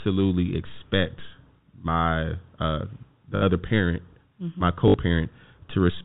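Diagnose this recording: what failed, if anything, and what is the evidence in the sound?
The failure is on the network side: packet loss with the last packet repeated. You can hear a small blip at 0.74 to 0.76 s, then two robotic stutters at 3.36 to 3.42 s, right before "other parent", and at 4.88 to 4.94 s. The receiver just replays the last chunk it got until fresh audio arrives. The 60 ms gaps fit roughly three 20 ms packets. The longer runs buzz at about 50 Hz. The G.711 telephone path carrying all this keeps its usual ceiling at 4 kHz.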